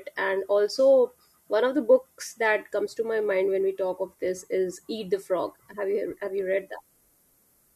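A speech clip with low bit depth with noise shaping from start to finish. A steady, thin hiss sits under the voice, climbing sharply toward the top of the band, roughly 35 dB below the signal. The coarse rounding fits a 10-bit signal, its error pushed upward in frequency.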